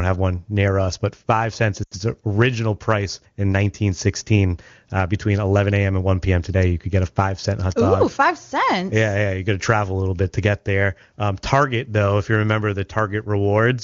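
At 1.83 to 1.94 s, lost AMR speech frames cut into the speech. The decoder repeats its last good settings, fading quickly, leaving a brief smeared dropout.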